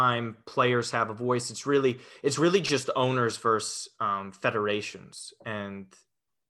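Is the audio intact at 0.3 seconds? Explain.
No. At 0.31 s there are dropped samples, likely a couple lost from the stream, so the waveform jumps abruptly and produces a single sharp click.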